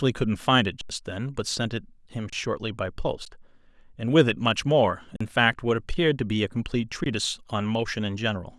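Speech stops five times from an underrun with held sample: 0.81–0.90 s, 2.30–2.33 s, 3.25 s, 5.16–5.21 s and 7.04–7.06 s. The buffer runs dry. The waveform then sits flat at its last value. Live audio is lost during each gap.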